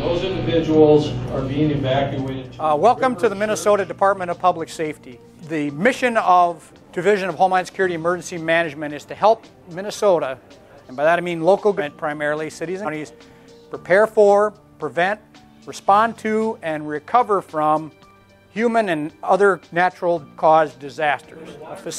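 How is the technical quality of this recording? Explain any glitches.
There are three small jumps. Compressed frames are skipped at 5.23–5.26 s, 11.77–11.81 s and 12.84–12.88 s, where the sound leaps ahead by roughly 200, 300 and 200 ms. That fits whole 46.4 ms frames going missing or being rejected by the decoder.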